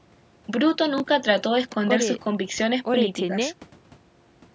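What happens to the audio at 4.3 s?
Nothing goes wrong at 4.3 s: the speech carries on intact there, heard through ordinary call microphone processing with its usual trimmed low bass and nothing above 8 kHz.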